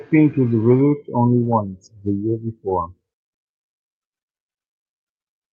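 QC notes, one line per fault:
Throughout: clock drift between sender and receiver. The sender's clock runs roughly 4 percent slower than the receiver's, so the jitter buffer keeps draining and the receiver has to pad the speech with repeated material, producing small, irregularly spaced timing hiccups across the whole clip.
0.77 to 0.81 s: short stall from a late packet. A packet arrived late, the buffer ran dry, and the receiver held the last sound for about 15 ms before resuming where it stopped. Nothing is lost, but that sound lingers slightly.
0.81 to 5.43 s: repeated timing corrections. To keep pace with the slow sender, playback runs at an effective 96 percent speed, with repeated short pieces adding around 200 ms overall. Each insertion is small and unevenly spaced.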